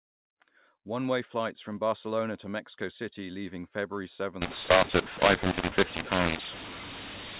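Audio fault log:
4.41–7.39 s, mu-law and A-law mixed up: mu-law telephone samples decoded as A-law scramble levels, making speech harsh and distorted and filling pauses with noise.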